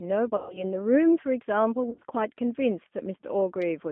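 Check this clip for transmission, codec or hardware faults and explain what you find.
Two faults are present, a low-bitrate speech codec throughout and two bursts of concealed packet loss.

The G.729 codec runs across the whole speech clip, likely the G.729A variant at 8 kbit/s. It rebuilds speech from a modelled vocal tract and sparse pulses, leaving a line band of roughly 200 Hz to 3.5 kHz and a plainly rough, synthetic texture, unlike simple band-limiting.

VoIP packet loss concealed by the speech codec occurs from 0.36 to 0.64 s, about 140 ms missing, and again from 1.90 to 2.04 s, where 80 ms is lost in scattered runs up to 40 ms. The decoder stretches its last pitch and filter into a fading buzzy tone or coloured noise rather than the hard silence of dropouts.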